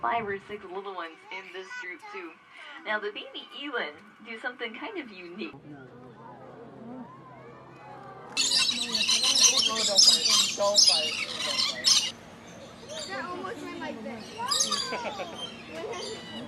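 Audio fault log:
Nothing stood out as a fault on listening to this clip.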